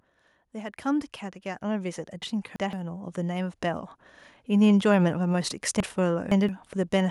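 From 0.53 s to 5.59 s, automatic gain rising lifts the level by about 12 dB. The gain control judged the input too quiet and ramped its gain steadily, so the speech and the background noise swell together over roughly five seconds.

From 2.22 s to 2.73 s, the chunks play out of order. A block of about 170 ms arrives late, sounding roughly two blocks behind where it belongs. The audio jumbles briefly, and there are three hard joins.

From 5.80 s to 6.49 s, the same out-of-order fault recurs, with 170 ms blocks. This time the late block lands about three positions behind. The span is longer, again with three hard joins.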